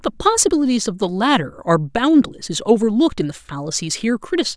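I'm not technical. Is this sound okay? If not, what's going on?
Yes, it's fine: nothing in this speech recording sounds broken or out of place, so there's nothing you need to worry about.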